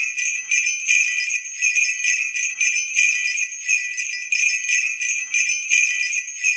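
The audio passed through an Opus call path whose 8 kHz bandwidth limits the top end. At 1.75 to 1.77 s about 0.7 s of audio was dropped in a skip ahead, so playback jumps forward with no fill. From 2.33 to 3.66 s a jitter buffer speed-up trimmed pitch-period slices totalling about a tenth of a second, so the sound runs 8% fast at unchanged pitch and feels hurried.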